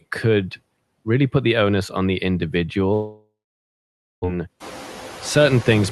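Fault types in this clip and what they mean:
Noise suppressor artifacts: A noise suppressor applies a frame-by-frame gain cut of about 15 dB to bands it treats as steady noise. The background drops in the gaps between phrases and returns underneath the speech, so the noise floor audibly pumps with the talker.
Long network dropout: From 2.93 to 4.26 s the stream stalls, likely from packets arriving too late or not at all. The last sound is stretched into a fading buzz, followed by about 0.89 s of silence. Playback resumes roughly 0.3 s later than before, with about 0.94 s of audio lost.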